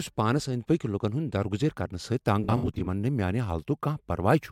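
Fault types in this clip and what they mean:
AAC frame loss with concealment: between 2.44 and 2.87 s the decoder lost about 213 ms of audio, scattered in short gaps across roughly 430 ms, the longest run being around 70 ms. Each gap was patched from the last good spectrum, so the speech turns smeared, noisy or phasey rather than dropping out. On a spectrogram this shows as blurred, flattened time-frequency patches with softened harmonics; the waveform keeps its energy but loses clean periodic detail.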